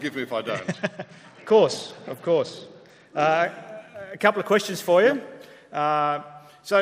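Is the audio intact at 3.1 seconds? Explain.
No. At 3.1 seconds the audio is inside a Bluetooth SBC bit pool drop running from 0.50 to 3.44 s. The link seems congested, so the encoder spends far fewer bits, which fits a bit pool falling from 28 to 10, near 84 kbps. Top sub-bands starve, the treble dulls and gritty noise rises.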